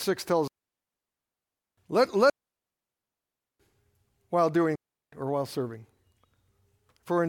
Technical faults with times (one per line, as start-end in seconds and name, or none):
0.48-1.78 digital wireless dropout
2.30-3.60 digital wireless dropout
4.76-5.12 digital wireless dropout